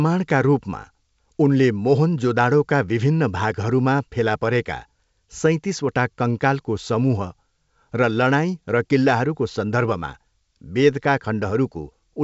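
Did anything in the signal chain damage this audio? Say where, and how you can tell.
No; the 64 kbit/s G.722 coding is working normally.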